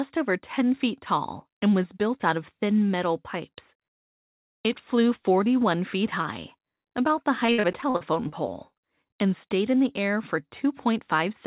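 From 7.46 to 8.34 s the sound turns choppy and robotic, broken by eight short holes, the longest about 58 ms, together covering roughly a third of the stretch. This is repeated packet loss: each lost packet was patched by extending the previous sound.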